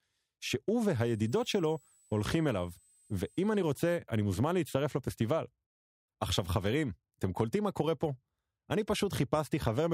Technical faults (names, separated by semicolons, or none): switching supply whistle